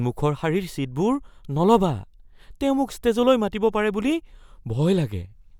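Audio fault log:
No fault turns up anywhere in this speech recording. The log has no timed entry for it.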